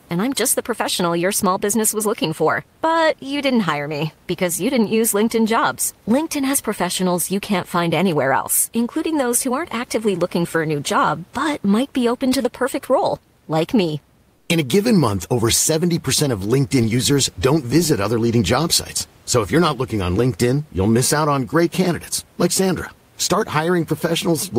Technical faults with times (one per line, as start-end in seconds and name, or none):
14.35-14.49 comfort noise in place of the background